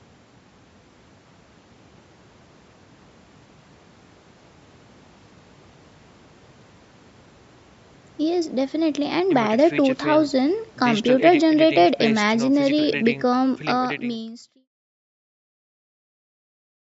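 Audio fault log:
No fault to log: the speech carries nothing above 8 kHz from the call microphone processing and eases out in a smooth fade from roughly 13 s to 14.69 s.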